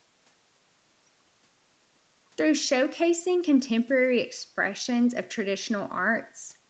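Nothing in this speech recording stood out as a fault on listening.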